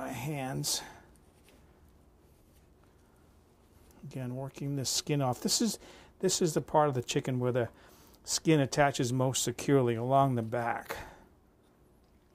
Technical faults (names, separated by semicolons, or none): none